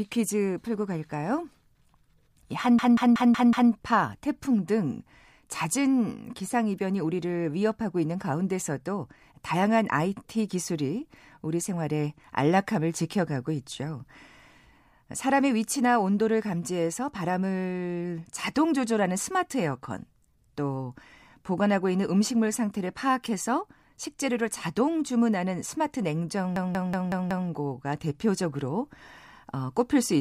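A machine-gun stutter, one 186 ms fragment repeating five times at about 5.4 Hz, hits 2.79–3.72 s and 26.56–27.49 s. This system hang loop means the driver froze while the hardware replayed a ring buffer, likely 8192 samples.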